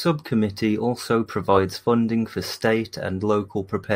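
No technical faults can be heard anywhere in the speech.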